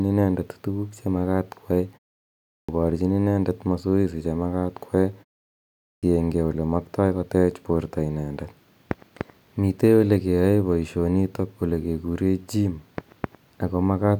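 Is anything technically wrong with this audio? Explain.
Yes. The audio has clipped starts after pauses, twice: 2.45 to 2.69 s, after a 0.55 s pause, and 5.80 to 6.03 s, after a 0.64 s pause. In each case the output path dozes off during silence and takes roughly a quarter second to come back, so about 235 ms and 227 ms of onset are swallowed. Speech bursts in abruptly with "parchin inendet masoesi che" and "ole maktai". On a waveform, silence runs straight into speech, and a spectrogram shows a blank gap and then energy switching on with a hard vertical edge.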